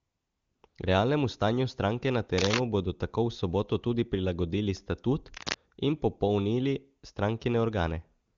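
From 0.00 to 0.63 s and again from 0.67 to 0.75 s, AMR comfort noise replaces the real background. The phone sent no speech frames there, so the receiver synthesised a smooth, even hiss from a rough level-and-spectrum summary. Unlike a dropout it never goes silent, and unlike real room tone it lacks any texture.

Cable scratch noise follows at 2.38 to 2.59 s, between "stanju stranke na" and "bodo tako v soboto", and at 5.34 to 5.57 s, after "soboto tudi prilagodili statut" and before "in popolnili". Each is a dense, irregular rustle about as loud as the speech. It is likely a worn cable or connector whose contact resistance flickered as it moved. Its ragged, uneven grain separates it from steady hiss or isolated clicks.

Comfort noise returns from 8.25 s to the end, again as that flat synthetic hiss.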